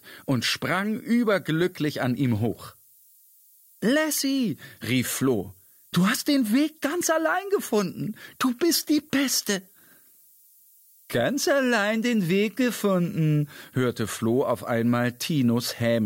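Throughout, a thin, steady hiss sits only about 25 dB below the sound and grows sharply toward the top of the band. This is low bit depth with noise shaping: coarse rounding, consistent with 8 bits, has its error pushed up into the highest frequencies.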